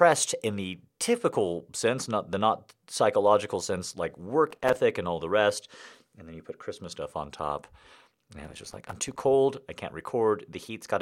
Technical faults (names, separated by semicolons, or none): processor overload crackle